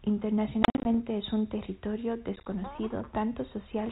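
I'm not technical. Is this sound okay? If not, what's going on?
No. This is packet loss on an ADPCM call: chunks of the phone signal went missing around 0.63 to 0.95 s, just before "es un territorio", and 2.36 to 2.47 s, just after it. The speech drops to silence in short bursts and comes back slightly distorted.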